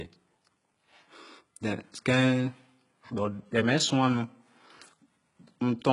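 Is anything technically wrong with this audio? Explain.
Yes, it has heavy HE-AAC compression damage running through the whole speech clip. The likely cause is HE-AAC's spectral band replication: only the lower spectrum is really coded, and the treble is faked by copying lower bands upward under a rough envelope. The damage is severe enough to point to a very low bitrate, around 12 kbps. Nothing reaches above 11.1 kHz, and the s sounds come out gritty and metallic because the copied harmonics don't line up with the real ones.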